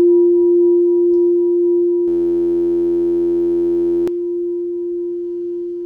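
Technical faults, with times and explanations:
2.08 to 4.08 s, system hang loop: the system froze while the sound hardware kept replaying one 11.61 ms slice of its ring buffer, which fits a 512-sample buffer. That tiny loop repeating 86.1 times a second becomes a steady buzz, and roughly two seconds of audio are lost.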